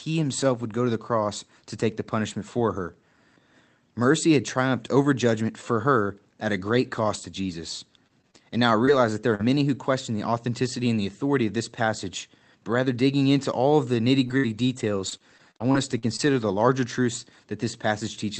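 Speech carried over a call link, with content up to about 8 kHz, which fits an Opus call near 32 kbps. At 7.13 to 7.15 s, just after "her at a great", a brief rough, noisy patch with no gap is a lost packet rebuilt from error correction, played from the next packet's low-bitrate copy. From 8.07 to 9.41 s, ending before "who question the authenticity", the sound turns choppy. This is repeated packet loss: five short holes, the longest 39 ms, were filled by extending the previous sound. From 14.27 to 16.61 s, after "all of the nitty", the same repeated packet loss returns more heavily. Ten gaps totalling about 300 ms, the longest 58 ms, were patched by concealment.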